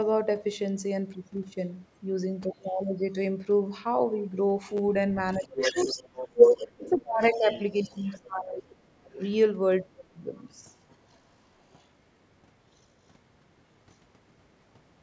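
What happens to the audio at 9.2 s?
At 9.2 s a faint second voice, about 20 dB below the talker, slips through briefly from 9.17 to 9.29 s. This is the other side's voice leaking through, likely because the echo canceller left some of the loudspeaker playback in the microphone signal.

That leak comes just as a one-second dip ends. From 8.19 to 9.19 s the talker's voice drops sharply, by as much as about 35 dB. That is speech suppressed in double talk, likely because the canceller turned everything down while both sides spoke at once.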